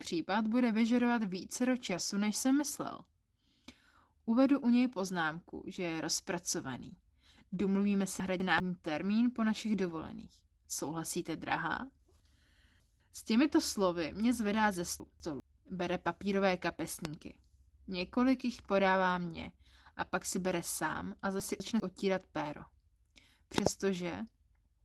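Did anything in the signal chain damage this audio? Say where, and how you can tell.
Yes. Three kinds of damage stand out in this speech recording.

At 1.89 to 1.99 s the speech turns briefly rough and noisy but never drops out. This is a lost packet rebuilt from error correction in the network stage. About 60 ms was lost, which fits three packets. The decoder filled the hole with the low-bitrate redundant copy that Opus carries in the following packet.

At four places the speech jumbles: 8.2 to 8.6 s (just before "termín po našich"), 12.2 to 13.0 s, 15.0 to 15.4 s (right after "slovy mě zvedá ze") and 21.4 to 21.8 s. These are chunks out of order in the buffer or storage stage. Audio blocks of 200 ms played late, swapped one place, and three places at 12.2 s, with hard seams.

Sharp pops sit on top of the continuing speech at 8.58 s, at 17.05 to 17.07 s, and as a double pop at 23.58 to 23.69 s. 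They peak about 20, 15 and 25 dB above the programme. These loud pops point to voltage steps from switching, static or a driver glitch, likely in the analogue or driver stage.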